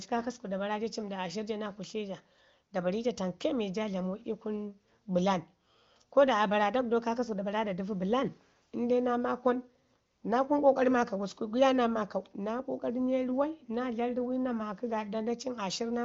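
Nothing goes wrong anywhere in this speech, which comes through the AMR wideband (HD Voice) codec at what sounds like one of its higher rates, with the audio stopping around 7.3 kHz as you'd expect from that path.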